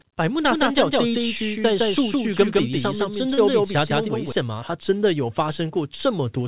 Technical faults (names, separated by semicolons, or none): doubled audio track; short concealed packet loss